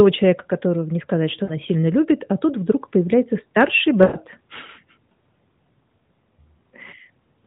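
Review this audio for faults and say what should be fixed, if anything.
Lost AMR speech frames occur at 1.44 to 1.53 s and 4.02 to 4.17 s. The first is a brief dip of about 40 ms. The second lasts about 120 ms, long enough that the sound drags out and fades before recovering. This fits the decoder concealing failed frames by reusing the last good pitch and vocal tract settings at falling gain. To prevent it, improve radio link quality or error protection so fewer frames fail their checksum.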